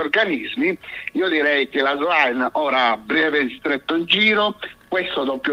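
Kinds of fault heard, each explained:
No kinds of fault are heard in this clip.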